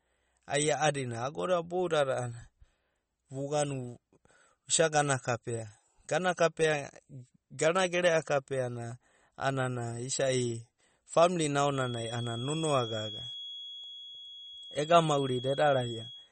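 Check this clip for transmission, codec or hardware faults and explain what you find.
Two faults are present: coding damage across the whole speech clip, and a steady tone over its final seconds.

MP3 compression is audible from start to finish. Nothing reaches above 8.4 kHz, where the encoder has cut the treble to save bits, and weak spectral detail flickers in and out between frames, giving a watery, swirling texture with chirpy s sounds and smeared onsets. The damage is plain enough to point to a low rate, around 35 kbps, as the likely cause. A simple low-pass filter would dull the top without this shifting, metallic churn.

A feedback whistle starts at 11.66 s and runs to the end: a thin, steady tone at 3.3 kHz, roughly 15 dB below the speech, swelling and fading slowly in level. The likely cause is a loudspeaker-to-microphone loop held just at the edge of feedback, ringing at one frequency without building up. 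Unlike mains hum it sits high and alone rather than low with harmonics, and unlike runaway howl it neither grows nor swamps the speech.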